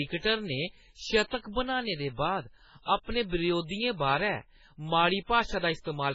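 From start to finish the speech carries heavy codec damage, likely MP3 compression at a very low bitrate around 16 kbps. Nothing survives above 7.5 kHz, so the treble sounds dull. Weak detail flickers between frames, giving a watery, swirly texture and smeared consonants.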